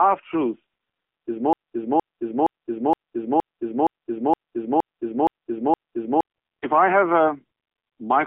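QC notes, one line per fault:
throughout: AMR narrowband mobile codec. Speech is squeezed into a telephone band of roughly 300 Hz to 3.5 kHz, with nothing above 3.7 kHz. The plainly buzzy, synthetic timbre fits AMR-NB at a low rate near 7.4 kbps. A spectrogram shows a hard, flat ceiling with empty space above it.
1.53 to 6.23 s: broken-record loop. The same 468 ms fragment plays back to back 10 times, replacing the audio that should have been heard. This is likely a stalled player or stream resending its last buffer. The waveform shows identical repeating blocks, and the spectrogram shows a periodic tiled pattern.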